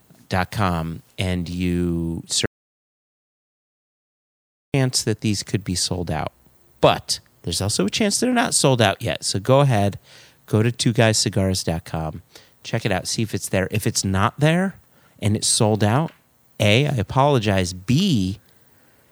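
At 2.46 s, after "dot com and you", the speech cuts to an audio dropout to silence until 4.74 s, resuming at "that these could be". About 2.3 s is gone, likely from lost input with silence written. Unlike a natural pause, even room tone vanishes.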